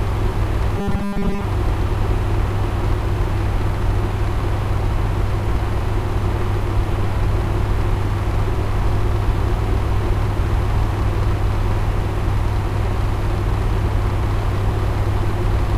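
At 0.33 s, about one compressed frame of roughly 26 ms goes missing, so the sound jumps ahead by around 30 ms, leaving a tiny glitch at the join. Then from 0.78 to 1.44 s you get robotic sound from repeated short buffers: a rigid, metallic 200 Hz buzz, likely from a 5 ms chunk being looped while most of the real audio is skipped.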